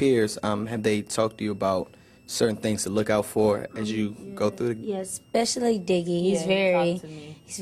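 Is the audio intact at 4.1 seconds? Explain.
No. At 4.1 s, as throughout the clip, a switching supply whistle sits under the audio: a thin high tone wandering between about 2.55 and 2.91 kHz, roughly 40 dB below the signal. A switching power supply is dropping into an audible burst mode, or beating against another supply, and its ripple leaks into the audio path. Because the burst rate follows the load, the pitch drifts within that band instead of holding steady.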